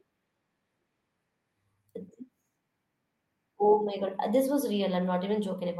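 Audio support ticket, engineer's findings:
Speech clip reviewed by ear, with no audible fault found and nothing to trace to any component in the playback chain.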